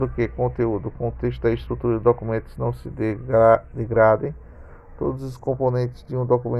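The left and right channels drift apart across the whole clip. The two sides seem to be running on separate clocks that disagree by something like 30 parts per million, so the gap between them keeps growing, reaching only a fraction of a millisecond by the end. Fold it to mono and the comb notches slide slowly through the spectrum, giving a creeping flange.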